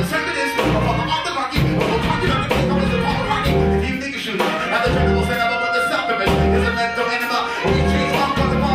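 Nothing goes wrong anywhere in this audio, so there's no technical fault to point out at any moment.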